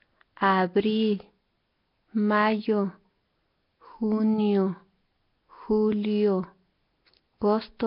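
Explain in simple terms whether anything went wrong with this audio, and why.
Speech sounds rough, hissy and underwater from start to finish, with no highs above 5.3 kHz. The likely cause is Nellymoser compression, Flash's crude microphone codec.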